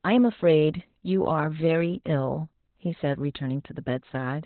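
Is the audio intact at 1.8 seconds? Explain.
No. At 1.8 seconds the speech carries Opus voice compression, which affects the whole clip. The codec is running its SILK linear-prediction mode in narrowband, so nothing survives above about 4.3 kHz. The excitation is coded so coarsely that the voice turns hoarse and faintly robotic, which fits a bitrate near 8 kbps. A plain low-pass filter would only muffle the sound; this adds a gritty, synthetic texture to the voice itself.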